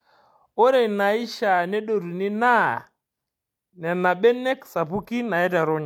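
Nothing technically wrong turns up anywhere in this bit of speech, so there's no fault to point to.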